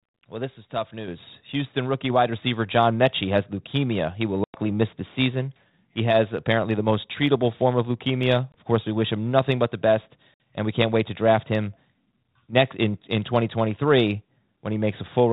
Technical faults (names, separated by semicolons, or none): microphone volume stepped up; packet loss on an ADPCM call